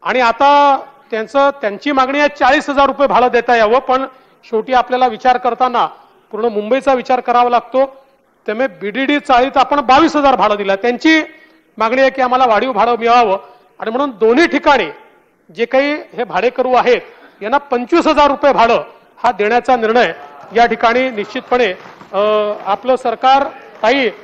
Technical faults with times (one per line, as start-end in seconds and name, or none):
none